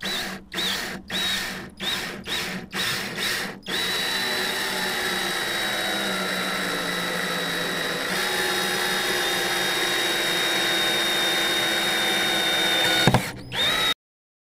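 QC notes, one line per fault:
13.93 s, cut-off end: the sound stops abruptly mid-event and falls straight to digital silence with no natural decay, staying silent for the final 0.54 s. The closing buffers were never written or played out, so the tail is simply missing.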